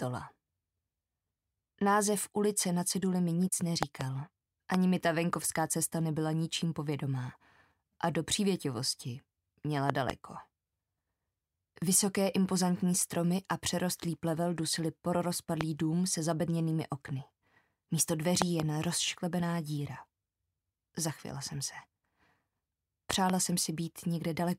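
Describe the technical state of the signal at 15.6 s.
A loud pop sits at 15.61 to 15.63 s. It is a single sharp pop, lasting about 20 ms. Its peak stands roughly 20 dB above the surrounding sound. The audio continues underneath without a break. The cause is likely a sudden voltage pulse, such as a plug, a switch or a static discharge, entering the signal chain. The following circuitry shapes that spike into the brief, hard transient heard here.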